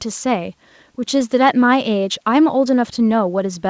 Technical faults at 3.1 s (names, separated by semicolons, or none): none